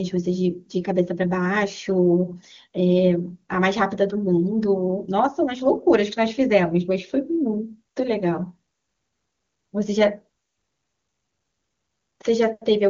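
No faults are audible anywhere in this speech recording.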